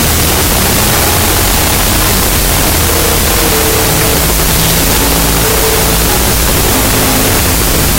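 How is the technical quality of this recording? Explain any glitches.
Poor: the whole recording is affected by a wrong sample width fault from start to finish. Data written as 16-bit integers are being read as unsigned 8-bit, so each sample splits into two bytes. Low bytes add loud hiss-like noise, high bytes carry a buried, distorted trace of the sound, and doubled sample count plays everything at half speed, an octave low.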